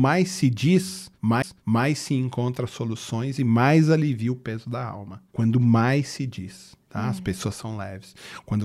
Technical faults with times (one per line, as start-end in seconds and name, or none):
1.42 CD skip